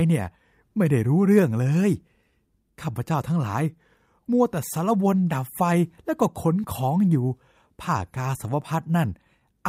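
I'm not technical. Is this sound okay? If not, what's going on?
No. There's clock drift between sender and receiver: the sending end's clock runs about 4 percent slow, so the receiving end keeps getting audio a little later than it expects and has to cover the gaps.

Those fixes show up as repeated timing corrections from about 0.22 s to 9.41 s. The receiver keeps repeating tiny slivers of speech, stretching things to roughly 97 percent speed and adding about a third of a second overall. You may hear faint hiccups or a slightly unsteady pace.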